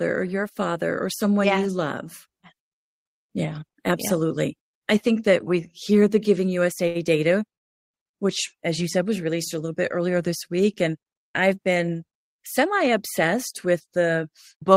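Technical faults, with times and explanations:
6.87–6.97 s, short stall from a late packet: a packet arrived late and the jitter buffer ran dry, so the receiver stretched the last sound for about 76 ms before resuming where it left off, just ahead of "data which as you". Nothing is lost, but one sound drags slightly.
7.55–7.94 s, call audio freeze: packets were likely held up in transit and the jitter buffer emptied. The receiver briefly continued the last sound, then fell to near silence for about 360 ms. Speech resumes intact with "which as you said", delayed by about 365 ms.
12.12–14.70 s, jitter buffer speed-up: after "I've been", the buffer held more audio than its target. The receiver trimmed it by repeatedly cutting pitch-period-sized pieces, roughly 150 ms in total. The speech runs about 6% fast at unchanged pitch and sounds slightly hurried.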